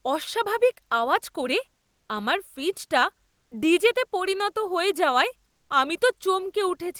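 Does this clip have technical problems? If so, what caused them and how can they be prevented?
Yes. Comfort noise replaces the background from 3.29 to 3.51 s and from 5.51 to 5.69 s. Smoother synthetic noise, likely from Opus discontinuous transmission, fills the pauses. The first patch is about 10 dB quieter. Disabling DTX prevents it.

The onset is clipped by the voice detector at 3.49 to 3.51 s. The sound starts abruptly after about 20 ms goes missing, likely from slow detection. Turning DTX off or adding detector lookahead prevents this.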